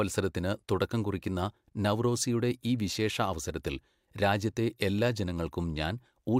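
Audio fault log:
No fault turns up anywhere in this speech recording. Nothing in it calls for an entry in the log.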